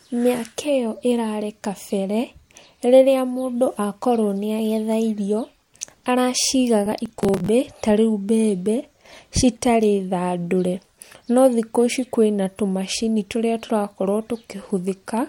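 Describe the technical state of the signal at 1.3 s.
At 1.3 s the speech signal is intact, with no audible technical fault at that moment.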